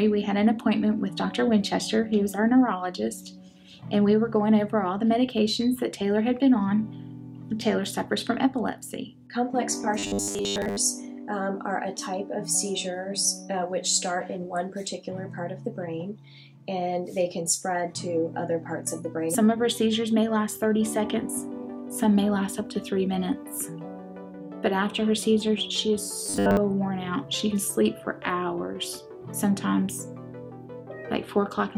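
From 9.99 to 10.77 s and again from 26.26 to 26.57 s, the sound turns into a rigid metallic buzz at 100 Hz: robotic sound from repeated short buffers, likely about 10 ms chunks looped while most new audio is skipped. Unlike dropouts, nothing goes silent; a fixed pitch is imposed instead.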